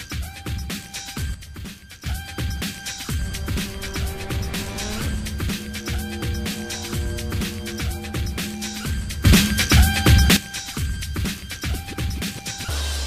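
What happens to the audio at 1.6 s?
At 1.6 s the audio sits inside a sudden gain jump running from 1.34 to 2.06 s. The level drops by about 8 dB in a single step and comes back just as abruptly. The sound and the background noise fall and recover together, which sets it apart from a fade or compressor pumping. The likely cause is a digital gain setting applied with no ramp.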